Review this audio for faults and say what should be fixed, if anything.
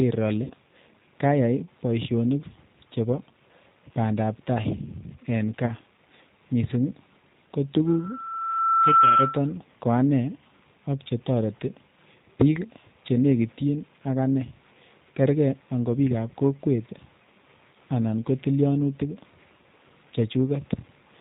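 The whole recording carries G.729 codec damage. Everything above 4 kHz is missing, and the speech has the rough, slightly synthetic texture of a vocal tract filter and pitch predictor driven by sparse pulses, which points to G.729 at 8 kbit/s. The coding damage is plainly audible throughout. To prevent it, carry the call on a wideband or higher-rate codec such as G.722 or Opus rather than G.729.

VoIP packet loss concealed by the speech codec occurs twice. From 0.44 to 0.54 s about 60 ms of audio is missing, which fits two lost packets. From 5.65 to 5.71 s about 30 ms is missing, which fits one. In each gap the decoder repeats its last pitch and filter at falling gain, so the sound is briefly stretched into a buzzy tone or coloured noise that fades, then recovers weakly. To prevent it, improve network reliability or enable forward error correction or redundancy so that lost frames can be rebuilt.

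A loudspeaker feedback squeal runs from 7.86 to 9.54 s. A single tone at 1.3 kHz swells over about a second until it sits about 10 dB above the speech. At that frequency the loudspeaker-to-microphone loop has gain above one, so the tone keeps growing until limiting or a break in the loop stops it. To prevent it, reduce monitor gain, separate or redirect the loudspeaker and microphone, or apply a notch or acoustic echo cancellation.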